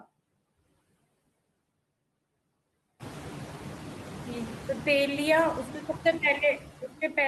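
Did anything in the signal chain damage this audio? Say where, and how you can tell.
Yes. There are noise suppressor artifacts from call processing throughout. Per-band gain cuts steady noise by about 18 dB in gaps, then lets it rise under speech.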